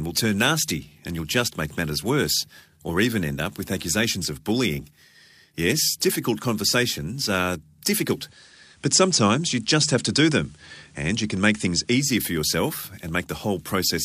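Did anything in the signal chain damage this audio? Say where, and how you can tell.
Yes. At the tuner, digital radio blending to analogue: from 8.10 to 12.14 s, after "difficult conversations are", the FM path fades in over 0.21 s, adding faint hiss and an about 2 dB level shift.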